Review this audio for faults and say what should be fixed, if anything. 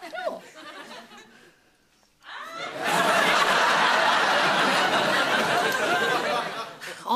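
No faults turned up in this audio, so there is nothing that needs to be fixed.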